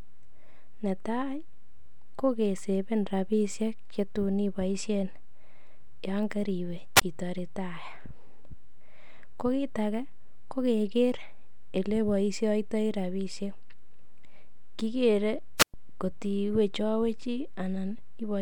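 At 6.96 s, just after "yoon koriwe", a wireless microphone squelch dropout occurs. The radio signal fades, hiss rises briefly, and the receiver mutes for about 22 ms. At 15.57 s a second dropout mutes the speech for about 114 ms before it returns at 15.74 s.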